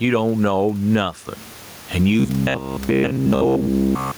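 It's a speech recording, and there's gain pumping right through it, with the level swinging by something like 15 dB. The room noise sits about 32 dB below the speech. The likely cause is the input gain set far too high for the mic, with a fast limiter or compressor clamping down on every peak, so everything ends up squashed and flat in dynamics. Then from 2.2 s to the end at about 4.17 s you get robotic sound from repeated short buffers. The voice turns into a stiff, metallic buzz locked at about 67 Hz that still loosely tracks the speech. That pitch fits a buffer of roughly 15 ms getting looped. Fresh audio is likely arriving too slowly, so the software keeps repeating the last chunk, and most of the real audio in that stretch gets skipped.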